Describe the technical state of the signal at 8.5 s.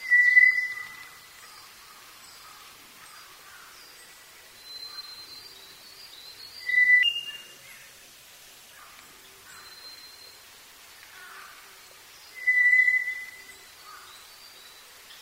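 At 8.5 s the audio sits inside a section at the wrong speed, running from 7.03 to 8.79 s. It plays about 1.42 times too fast, likely from being fitted to the wrong clock. Pitch rises about seven semitones, so the sound turns high and hurried.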